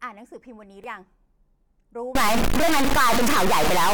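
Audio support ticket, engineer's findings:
Damaged data in a compressed stream, 0.84 s. Brief glitch. Probable component: decoder input. Corrupted frame bytes, so the decoder misreads the frame, loses sync and skips to the next valid header.

Stuck bit, 2.15 s to end of clip. Distortion on speech. Gaps fill with noise. Likely cause: faulty data line or converter holding one bit fixed, so about half of the samples are offset by that bit's weight.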